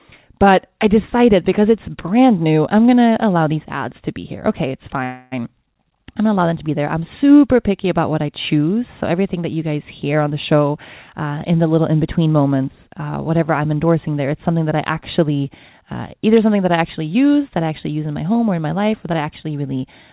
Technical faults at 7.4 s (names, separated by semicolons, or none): none